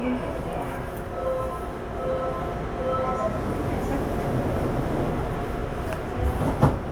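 Nothing in this short recording of everyday sounds stands out as a technical problem; it all comes across just as it should.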